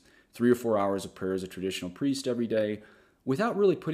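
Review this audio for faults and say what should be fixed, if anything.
No faults found; nothing needs fixing.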